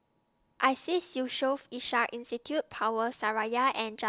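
No technical faults can be heard anywhere in the speech. Nothing in the audio breaks up, drops out or shifts at any point.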